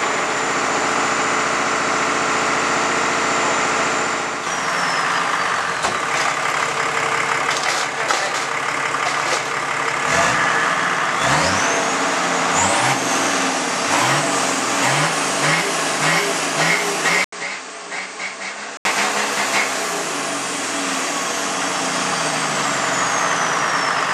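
From 17.24 to 18.85 s the audio turns duller and quieter, about 10 dB down, with nothing above 8.9 kHz and an 80 ms gap. This is likely an input switched to a poorer device.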